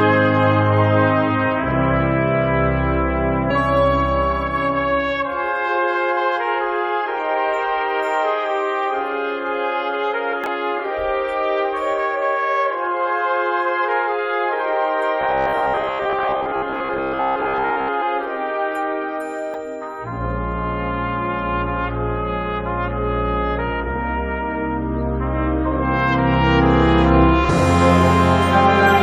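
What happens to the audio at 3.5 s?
At 3.5 s the decoder drops a run of compressed frames, either missing from the file or rejected as damaged, so the audio jumps ahead by about 150 ms.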